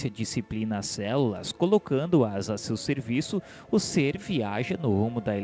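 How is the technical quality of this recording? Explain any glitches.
The technical quality is good, with no glitches to explain; the sound came through a call codec that leaves nothing above 8 kHz.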